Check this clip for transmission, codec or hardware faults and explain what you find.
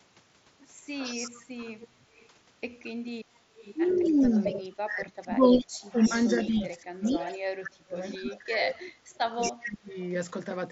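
Three faults can be heard in this speech clip: a recurring echo leak, one concealed Bluetooth headset packet loss, and speech suppressed in double talk. The mSBC headset path passes speech up to 8 kHz with only light graininess.

Echo leak appears at 0.95–2.28, 3.56–4.62, 5.45–6.7, 7.04–7.38, 8.03–8.36 and 9.14–9.93 s. A copy of the speech trails it by 225 ms, about 15 dB down, about 25 dB down at 8.03 s and about 10 dB at 9.14 s. This is likely a far-end loudspeaker echo canceller letting some of its microphone pickup through. On a spectrogram, faint duplicate harmonics are shifted right by 225 ms.

Concealed Bluetooth headset packet loss occurs at 1.62 s, where about 7.5 ms of audio went missing between headset and phone. The receiver filled the gap by repeating the best-matching recent waveform, so it is nearly inaudible. The waveform shows a short repeated cycle with no dropout to silence.

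Speech suppressed in double talk spans 3.94–8.97 s, with about 3 s affected in all, and again at 9.45–9.95 s. The talker dips by up to about 30 dB, loses its highs or cuts out in pieces. This is likely the echo canceller turning down both its own talker and the loudspeaker echo while they overlap. The waveform shows sudden envelope holes, and the spectrogram shows the upper bands thinning.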